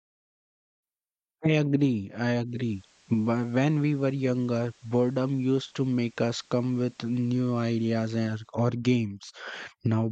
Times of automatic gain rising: none

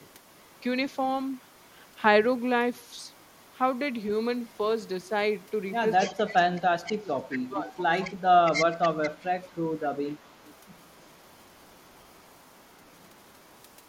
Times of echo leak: 0.00-0.96, 1.33-1.96, 2.77-3.58, 4.44-5.09, 5.40-5.51, 5.99-6.17, 6.56-13.88

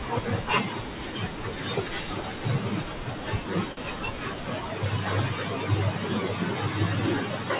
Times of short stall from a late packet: 3.72-3.79

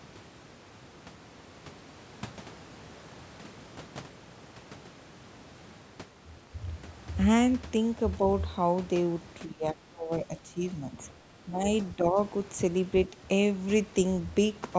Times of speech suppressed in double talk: 6.41-6.52, 9.46-11.67, 11.96-12.18

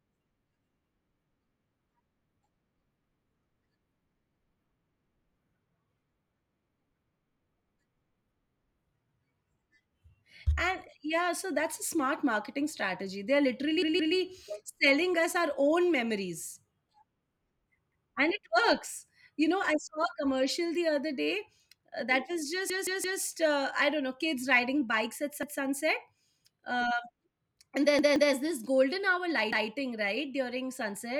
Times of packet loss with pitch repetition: none

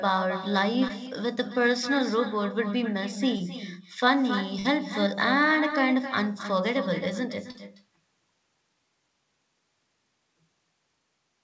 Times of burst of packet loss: 4.59-4.67

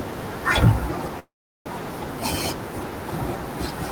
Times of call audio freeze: 1.19-1.68

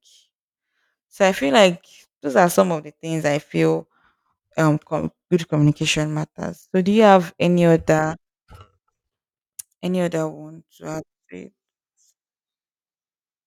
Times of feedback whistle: none

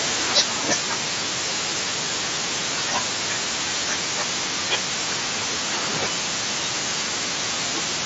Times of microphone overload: 0.35-0.41

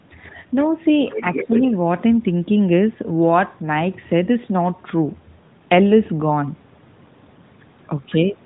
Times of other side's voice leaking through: 1.09-1.72

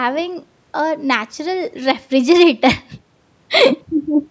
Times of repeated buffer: none

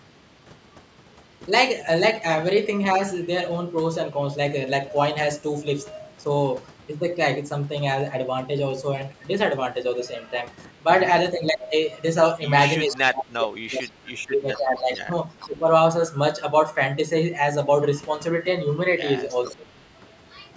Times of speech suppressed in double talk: 11.32-11.73, 12.87-15.66, 19.56-19.69

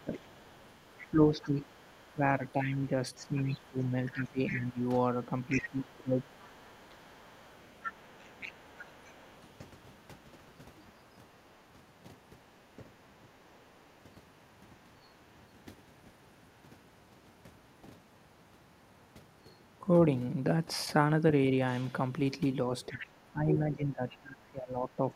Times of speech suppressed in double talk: 0.04-6.34, 7.41-8.88, 12.77-13.52, 22.89-25.15

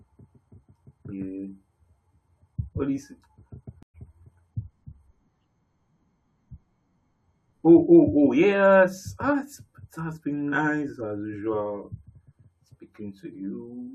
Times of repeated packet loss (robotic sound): none

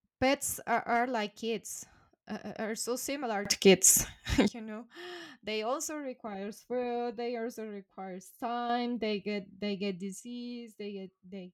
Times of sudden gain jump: 3.45-4.48, 8.70-10.20

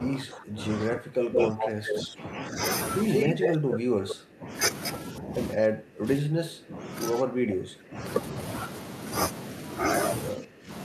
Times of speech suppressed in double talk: 0.00-2.61, 3.26-4.52, 5.13-6.88, 7.19-8.03, 10.34-10.70

